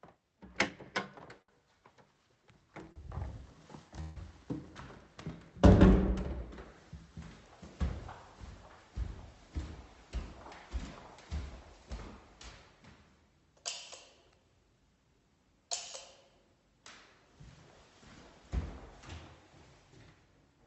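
At 1.42 s and again at 2.92 s there's a short stall from a late packet. The jitter buffer ran dry, so the receiver stretched the last bit of sound for about 64 ms and then 35 ms, giving a brief held, slightly buzzy smear before things pick up with nothing lost.

From 4.01 to 4.17 s the sound freezes into a fading buzz for about 152 ms without ever dropping to silence, then carries on where it left off. That's a call audio freeze, likely packets held up in transit emptying the buffer, with the Opus call path's roughly 8 kHz top end audible throughout.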